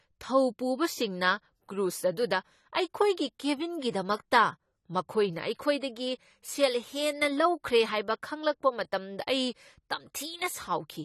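Throughout, the speech is band-limited with nothing above 14 kHz, dull and smeared, with fizzy sibilants, likely from AAC compression at a low bitrate, consistent with roughly 32 kbps.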